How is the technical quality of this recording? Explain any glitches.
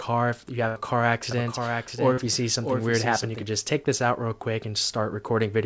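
The recording has three faults: a burst of packet loss near the start, a doubled audio track through the middle, and a short concealed packet loss inside that doubled section. The sound also passes through a call codec, with nothing above 8 kHz, which fits G.722 at 64 kbps.

A burst of packet loss occurs from 0.68 to 0.78 s. About 80 ms of audio never arrived in time. The receiver covered roughly 77 ms of that gap by extending the last sound it had and turning it down as the gap went on. You hear a held buzz or fading hiss that dims away. The sound then picks up further along, and the stretch in between is gone.

A doubled audio track runs from 1.31 to 3.43 s. A second full-band copy of the same sound plays roughly 0.7 s behind the first, about 5 dB quieter. The copy is dry, with no reverberant tail or room colouring, and it begins and ends abruptly at those points. The likely cause is a second capture through a slower path, or an edit that left two copies out of step.

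A short concealed packet loss falls at 2.14 to 2.19 s. About 40 ms went missing. The decoder invented around 35 ms of replacement by continuing the preceding sound, using its pitch where it was voiced and shaped noise where it was not, then blended back into the real signal. The result is a brief smear or wobble, and any short sound in that moment can disappear.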